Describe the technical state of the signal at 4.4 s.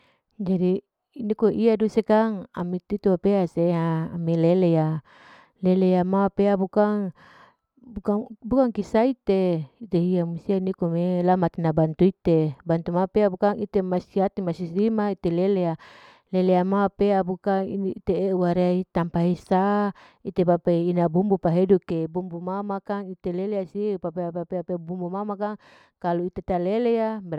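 At 4.4 s the speech signal is intact, with no audible fault at that moment.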